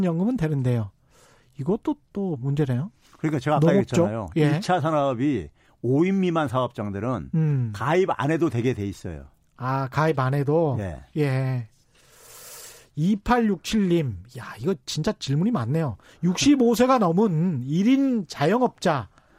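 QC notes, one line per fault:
No faults found in this speech clip.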